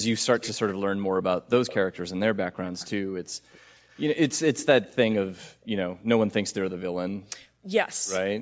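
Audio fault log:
1.67–1.75 s, 2.79–2.90 s, 3.88–4.05 s and 4.82–4.87 s, echo leak: brief scraps of the speech return 287 ms after the original, the same lag each time. The first is well below the direct speech, and each later scrap is fainter, until the last is barely there. The likely cause is a far-end loudspeaker whose echo canceller left part of what its microphone picked up, and that residue travelled back down the line.
7.46–7.56 s, background gated by the echo canceller: for about a tenth of a second the room sound beneath the speech falls away by as much as about 35 dB, then returns. The echo canceller pulled the microphone down hard while it judged the loudspeaker active, so the background ambience briefly disappears, leaving an unnatural hole in the room tone before the canceller releases.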